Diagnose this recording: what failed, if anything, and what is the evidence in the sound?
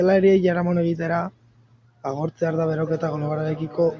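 Feedback echo between two devices: one device's playback re-enters the other's microphone, uncancelled. From 2.08 s to the end, speech returns about every half second, about 16 dB down.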